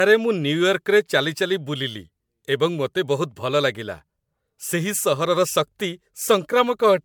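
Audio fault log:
Throughout: generation loss. The speech has a swirly, smeared quality and a hollow, phasey tone, and consonant attacks sound blurred rather than crisp. Content reaches up to about 20.1 kHz, so this is not the dull top of a single low-bitrate encode. The damage likely comes from repeated lossy passes, roughly seven, consistent with MP3 at 128 kbit/s. Each new pass quantises on a shifted frame grid, so the noise and spectral holes build up.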